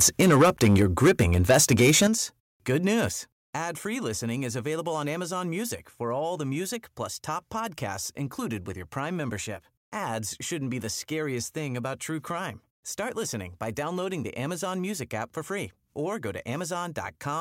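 Microphone overload from 0.0 to 2.07 s gives this speech a harsh, crackling edge on the loudest syllables, with peaks about 8 dB past the converter's limit and roughly 7 percent of samples flattened, likely because the microphone's input volume was set too high. Microphone volume stepped down at 0.22, 2.07 and 3.09 s, with level and background dropping abruptly by about 2, 8 and 6 dB. The call software likely lowered the device's input gain in response to the clipping, which stops once the 8 dB step lands.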